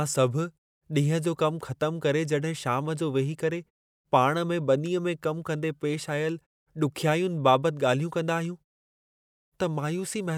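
The speech signal has no technical faults; the background falls to silence in the pauses and returns in time for each next phrase, which is the gating working as designed.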